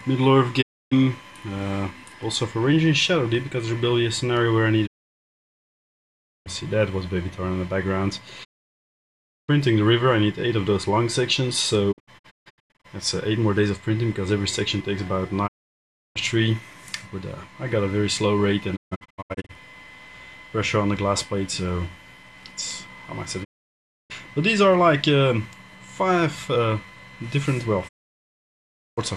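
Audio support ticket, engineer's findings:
Digital broadcast dropout: sound fades out in about 20 ms, mutes, then resumes. Holes at 0.61–0.93, 4.85–6.48, 8.43–9.50, 11.91–12.86, 15.46–16.17, 18.75–19.51, 23.43–24.12 and 27.87–28.99 s. At 11.91 and 18.75 s the muting is broken into short holes of up to 144 ms each. Receiver is losing the signal or rejecting failed frames, and the hole lengths fit 24 ms frames. Missing material is not recovered.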